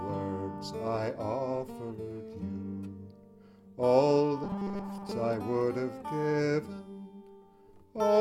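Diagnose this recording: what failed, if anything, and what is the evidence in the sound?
From 4.44 to 5.11 s the sound turns into a rigid, metallic buzz at a fixed 200 Hz. It still loosely tracks the shape of the audio. This is robotic sound from repeated short buffers, likely a starving driver or audio buffer. New data arrived too slowly, so the last fragment was looped to fill the gap. A 200 Hz pitch means each repeat lasts 5 ms. Most of that stretch is repeats rather than real audio.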